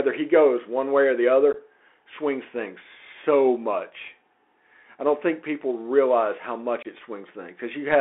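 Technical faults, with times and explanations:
Throughout: Bluetooth CVSD headset codec. Speech is confined to about 300 Hz to 3.4 kHz, with a granular hiss and scratchy s sounds from a one-bit adaptive-step coder, a steady grain rather than gaps.
1.53–1.56 s and 6.83–6.87 s: unconcealed Bluetooth headset packet loss. Abrupt holes of 15 ms and 22.5 ms, roughly a couple and a few lost packets, and the speech returns briefly quieter.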